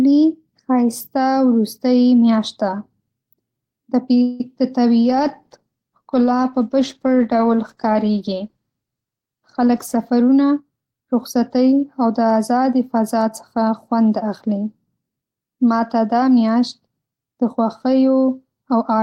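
At 4.22 to 4.41 s the speech stalls into a short fading buzz, most likely a call audio freeze: the jitter buffer ran dry, inserting about 174 ms without losing anything. From 5.04 to 10.14 s there's a call bitrate drop, 32 down to 18 kbps, so the voice turns coarse and muffled. Overlapping that, 9.60 to 11.71 s brings a jitter buffer speed-up: trimmed pitch periods make speech run about 8% fast, roughly a fifth of a second gone, sounding hurried.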